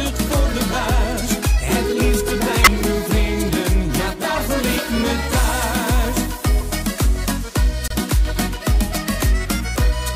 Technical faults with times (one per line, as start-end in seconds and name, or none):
2.58-2.71 corrupt frame decoded
4.36 corrupt frame decoded
6.61 corrupt frame decoded
7.88-7.92 corrupt frame decoded